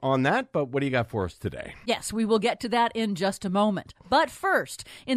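No technical faults can be heard anywhere in the audio.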